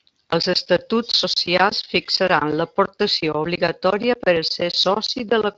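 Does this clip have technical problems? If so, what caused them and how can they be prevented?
No, the speech carries only the light coloration of a Speex link at a fairly high quality setting, and nothing in the signal needs correcting or preventing.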